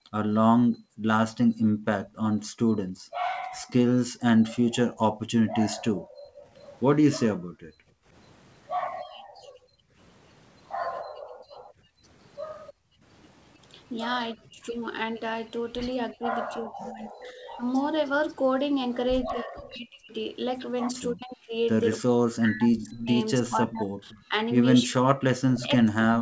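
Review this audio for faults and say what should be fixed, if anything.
Background gated by the echo canceller runs from 0.0 to 13.03 s. The room sound dips and drops out, about five seconds in all, by up to about 40 dB. The canceller clamps the microphone while the far side plays. A gentler suppressor with comfort noise would prevent it.

An echo leak appears at 6.57 to 6.76 s and 12.67 to 12.73 s, about 25 dB below the speech. It returns from 22.78 s to the end, louder, at about 15 dB below. A copy trails by 305 ms, likely because the far-end canceller missed part of its loudspeaker signal. Better echo-path tracking or headphones on that side would prevent it.

Speech is suppressed in double talk at 14.36 to 14.61 s, by about 35 dB, and at 16.13 to 17.62 s, by about 25 dB. From 19.25 s to the end it drops by up to about 40 dB. The canceller likely mistook the talker for echo while both spoke. 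Better double-talk detection would prevent it.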